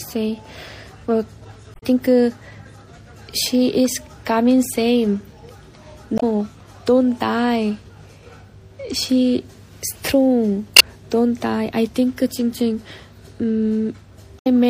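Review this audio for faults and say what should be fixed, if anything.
Throughout the clip the sound is watery and swirly, with high, hissy detail chirping metallically as it flickers in and out; transients smear rather than snap. This is MP3 compression, likely from too few bits: the encoder zeroes quiet frequency lines from frame to frame, and the damage points to a low rate around 64 kbps. To prevent it, keep an uncompressed or lossless master and encode from that at a much higher bitrate.

Four brief glitches break the flow at 1.71 to 1.83 s, 6.15 to 6.23 s, 10.76 to 10.81 s and 14.37 to 14.47 s. These are damaged data in a compressed stream: bytes in the file were lost or corrupted, so the decoder misreads the affected frames, loses sync and skips ahead to the next valid frame header. To prevent it, transfer and store the file with checksums or error correction, and re-encode from a clean source.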